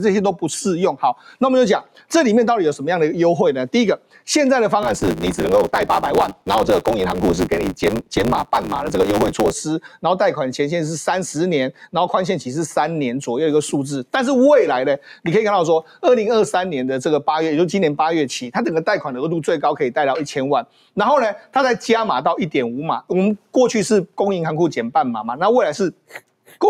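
Sound cut by the noise suppressor first appears at 1.14–1.41 s, again at 1.82–2.11 s and at 3.97–4.27 s. In each stretch the suppressor mistakes part of the wanted sound for background noise and pulls it down by about 10 to 12 dB. The level sags briefly and sustained or decaying parts thin out or end early, while sharper onsets survive.

A block size mismatch (truncated) runs from 4.82 s to 9.53 s. One stage hands over longer blocks than the next stage takes in, and the end of each block is discarded. That chopping puts a steady 100 Hz buzz under the audio, which fits a 512-sample block being cut short, and the sound hurries along at about 1.16 times normal speed with its timbre essentially unchanged.

The noise suppressor cuts return at 11.72–11.87 s, 15.83–16.03 s, 20.64–20.97 s, 21.39–21.55 s and 25.92–26.29 s, each a dip of about 11 to 12 dB lasting a fraction of a second. These are the same brief sinks in level and clipped tails heard at the start.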